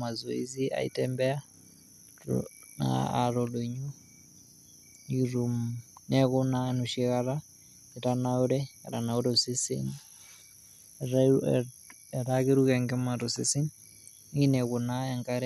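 Speech recording with nothing technically wrong to report, so there are no times or causes to give.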